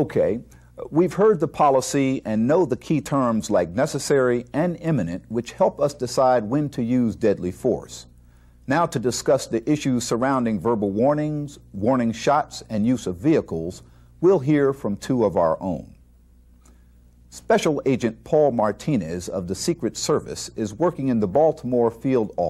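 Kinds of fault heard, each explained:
No kinds of fault are heard.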